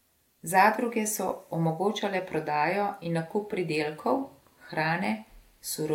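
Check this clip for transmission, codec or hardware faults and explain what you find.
Nothing in the speech here points to a transmission, codec or hardware fault; the signal stays continuous and stable throughout.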